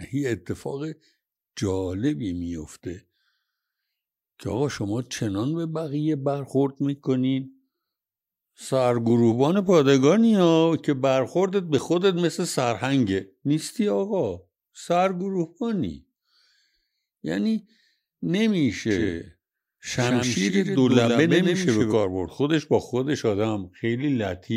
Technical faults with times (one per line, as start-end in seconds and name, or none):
18.91-21.93 doubled audio track